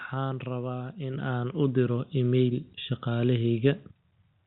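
At 1.14 s the microphone volume steps up by about 6 dB. At 2.16 s it rises again by about 2 dB. The call software judged the input too quiet and raised it abruptly. Voice and background jump louder together each time.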